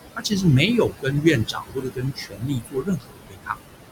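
Noise suppressor artifacts run through the whole clip. The suppressor pulls down the bands it judges to be steady noise by about 21 dB, frame by frame, so the room noise, which sits about 9 dB below the speech, drops away in the gaps and comes back underneath the talking.

Speech cut by the noise suppressor happens at 0.16 to 0.32 s (about 100 ms affected, down by up to about 13 dB) and at 0.89 to 1.25 s (about 200 ms, up to about 18 dB). The longest stretch runs from 1.45 to 3.57 s, where roughly one and a half seconds are affected, by up to about 21 dB. In each case the suppressor mistook parts of the speech for background and turned them down with the noise, so those sounds come across as swallowed or faint.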